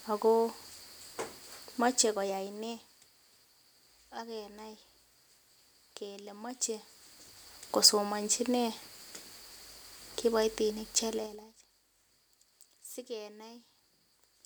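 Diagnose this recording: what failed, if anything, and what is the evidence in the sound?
Zipper noise appears between 11.09 and 11.52 s, where the speech level falls by roughly 20 dB in 4 dB steps at roughly ten steps a second. Because the gain jumps once per block instead of ramping, each jump puts a small click in the waveform, heard as a ticking that rides on the speech only while the level moves. That points to gain applied per buffer at the driver or processing stage. The clicks are evenly spaced and tied to the level change, which separates them from random dropout clicks.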